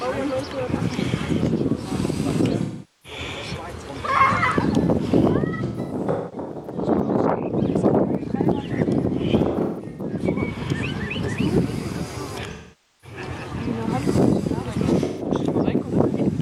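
AAC frame loss with concealment strikes at 2.61, 5.47, 9.48, 12.51 and 15.03 s. The decoder rebuilds the missing frames from the last good spectrum, so each gap becomes a smeared, noisy patch. The one from 5.47 to 6.81 s breaks into scattered dropouts of up to about 200 ms.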